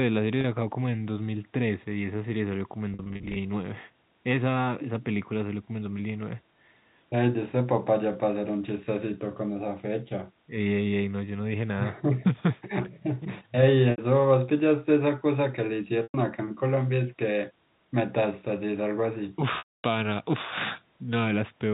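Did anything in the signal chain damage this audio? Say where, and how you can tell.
Yes. The damage is packet loss with pitch repetition on the network leg, at 0.41 s, 2.94–3.36 s (scattered), 13.91–13.98 s, 16.03–16.14 s and 19.58–19.84 s. The receiver loops the last pitch period, giving a brief buzzy hold that fades over about 50 ms, quieter on the longest gap.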